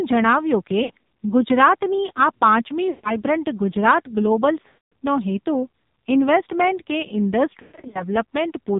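The whole clip carries the sound of the AMR narrowband mobile codec. Nothing above 4 kHz survives, and the speech has the buzzy, synthetic edge of a vocal-tract model fed with very few pulses. The heaviness points to a low mode near 5.9 kbps. A simple telephone band-limit would only dull the top end, but this codec also rebuilds the voice, so it sounds manufactured rather than just muffled.

Lost AMR speech frames break through four times. From 0.84 to 0.91 s, about 60 ms is lost. From 2.90 to 3.17 s, 140 ms goes missing. From 4.68 to 4.95 s, 240 ms is lost. Between 7.62 and 8.04 s, 220 ms is scattered across about 320 ms, with the longest run 120 ms. Instead of snapping to hard silence like a plain dropout, the decoder keeps repeating the last pitch and voice shape while the level falls. The longer gaps sound drawn out and fade away, and the voice returns weak or rough for a moment.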